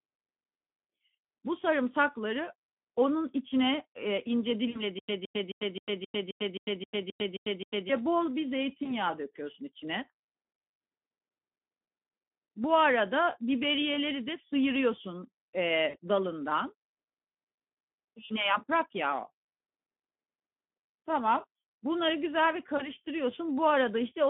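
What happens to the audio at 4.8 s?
Around 4.8 s the sound smears into a brief stretched sound that sags in level and then recovers slightly late. This is VoIP packet loss concealed by the speech codec, running from 4.69 to 4.83 s. About 60 ms of audio went missing, which fits three lost 20 ms frames. The decoder filled the gap by repeating its last pitch and spectral envelope at falling gain. Because each rebuilt frame feeds the next, the distortion lingers briefly after real packets resume.

Underneath, and throughout the clip, the speech has the hoarse, grainy texture of the Speex codec. The damage is plainly audible, consistent with a low setting around 11 kbps, where the excitation gets too few bits to sound natural. The band is also confined to roughly 200 Hz to 3.4 kHz, giving the narrow telephone character that frames the dropout.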